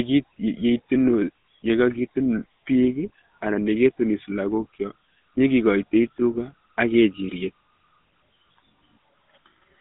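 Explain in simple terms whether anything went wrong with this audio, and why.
The speech goes through the GSM full-rate codec, the old mobile-phone one, the whole way through. It rebuilds voices from a simple throat model driven by spaced pulses, so it sounds plainly buzzy and gravelly, and everything outside roughly 150 Hz to 3.7 kHz is gone.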